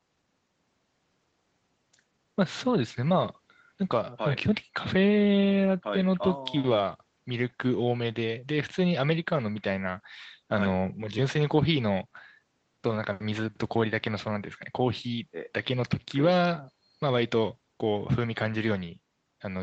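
Nothing stood out on listening to this speech recording, which has passed through a call's microphone processing and codec and so carries no content above about 8 kHz.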